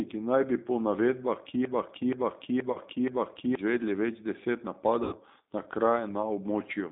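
G.729 codec, throughout the speech: the band sits between about 200 Hz and 3.7 kHz, with nothing above, and the voice has the rough, slightly synthetic edge of a coder that rebuilds each 10 ms frame from a vocal tract filter, a pitch predictor and a handful of pulses rather than the waveform itself. The damage is plainly audible, and the character fits G.729A at 8 kbit/s.

VoIP packet loss concealed by the speech codec, at 2.72 to 2.78 s, right after "naj bi po": about 30 ms of audio is missing, which fits three lost 10 ms frames. The decoder carries the last pitch and filter forward with falling gain, so the sound smears into a brief buzzy tone or coloured noise. At 5.04 to 5.17 s, after "izvedli več deset", a longer gap of about 80 ms stretches into a fading buzzy tone or coloured noise, and the voice stays weak or distorted for a moment after audio resumes.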